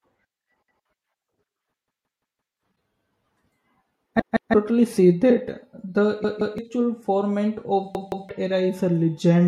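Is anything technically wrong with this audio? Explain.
Yes, there's a repeated buffer problem: roughly 171 ms chunks of the speech replay with hard joins, which fits an 8192-sample buffer. New audio arrived late, so the last block played again. It happens at 0.68 to 0.85 s (one extra play), 1.88 to 2.56 s (four), and 4.20 to 4.54, 6.24 to 6.58 and 7.95 to 8.29 s (two each). It sounds like stuttering, and the longest run swallows well over half a second of audio.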